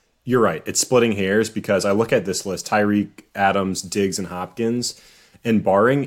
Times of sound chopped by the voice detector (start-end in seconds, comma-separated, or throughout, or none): none